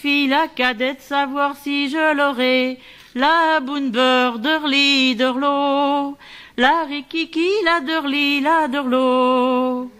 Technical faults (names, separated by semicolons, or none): none